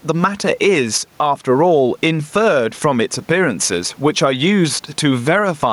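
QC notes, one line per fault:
Throughout: gain pumping. The gain swings by around 10 dB, and the speech sounds squashed. The likely cause is gain set far too high, with a fast limiter clamping each loud moment.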